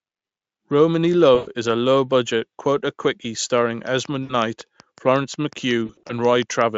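At 1.35 s, VoIP packet loss concealed by the speech codec: the decoder stretches the last sound into a fading buzz instead of silence for about 0.14 s, which fits roughly 120 ms of lost packets. From 3.87 to 6.62 s comes a train of clicks, about fifteen near-identical ticks at a regular 5.5 per second, a few dB above the speech. They continue through pauses, unlike the concealment, and likely come from interference or a faulty connection. At 4.23 s a shorter concealment, about 60 ms, smears into buzz. From 5.85 to 6.13 s, about 120 ms of losses scattered over 240 ms produce repeated brief buzzy patches, none longer than 40 ms.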